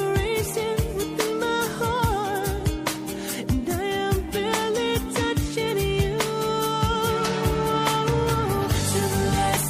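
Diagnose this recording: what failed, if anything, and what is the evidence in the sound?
The failure sits at the codec stage and runs through the whole clip: plainly audible MP3 compression damage, likely from encoding at a low bitrate, with the sound pointing to something around 64 kbps. The top end has a watery, swirling quality as weak frequency components drop in and out between frames. Transients lose their edge and smear. Too few bits forced the encoder to discard detail that its hearing model judged expendable.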